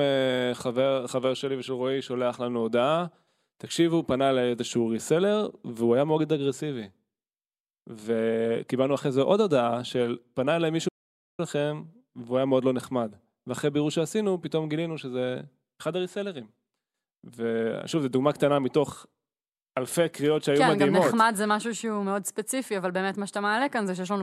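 The input signal was likely lost for half a second, with the recorder writing silence in its place, giving an audio dropout to silence from 10.89 to 11.39 s. The speech cuts off abruptly into dead silence, with no room tone, then resumes mid-flow.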